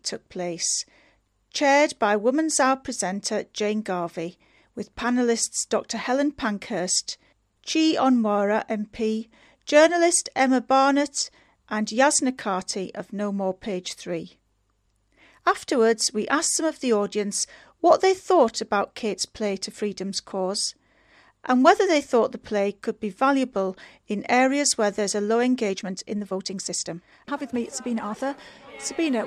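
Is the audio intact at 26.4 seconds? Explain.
No. The moment falls inside a time-stretched section from 25.6 to 28.3 s, where the sound runs about 1.35 times faster at unchanged pitch. This was likely done by software discarding short segments to shorten the passage, which makes it sound rushed.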